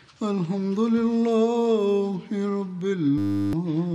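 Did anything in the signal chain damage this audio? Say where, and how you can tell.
Yes, a system hang loop at the driver or buffer stage. From 3.18 to 3.53 s a 10 ms slice repeats about 35 times, a steady 100 Hz buzz, as the hardware kept replaying its ring buffer while the driver froze. Roughly 0.4 s of real audio is gone.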